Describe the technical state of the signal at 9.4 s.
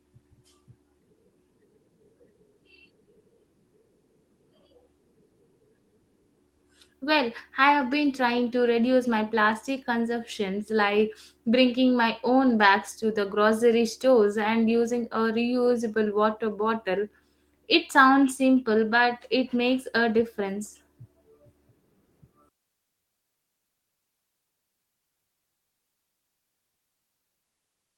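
At 9.4 s the speech signal is intact, with no dropout, click, distortion or other fault audible at that moment.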